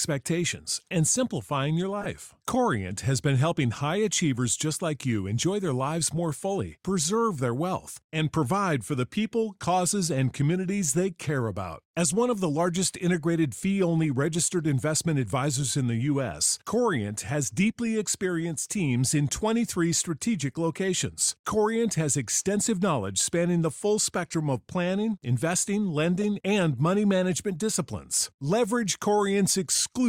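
At 2.00 to 2.06 s and again at 26.21 to 26.24 s, the speech carries a corrupt frame decoded: flipped bits in a few compressed frames were played anyway, throwing energy to wrong frequencies as a brief chirpy burst, seen as a short vertical smear on the spectrogram.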